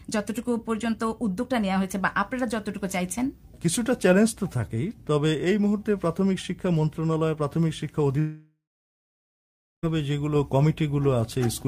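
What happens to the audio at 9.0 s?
At 9.0 s you're right in the middle of a long network dropout running from 8.19 to 9.85 s. Audio likely stopped arriving, so the last sound gets stretched into a fading buzz, then about 1.3 s of silence, and the sound resumes with roughly 1.6 s lost.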